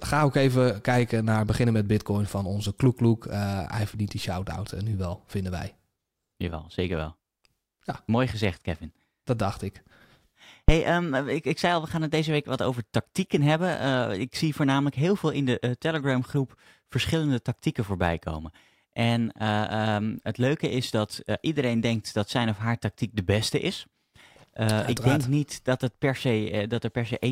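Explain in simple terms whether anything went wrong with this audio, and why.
A phantom power thump hits at 10.69 to 10.75 s: power switched on or off at the live input sends a brief, deep thud through the recording.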